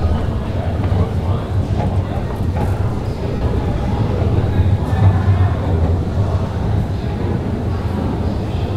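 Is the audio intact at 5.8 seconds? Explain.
Yes, at 5.8 s the sound carries on cleanly, with no dropout, click, distortion or other fault.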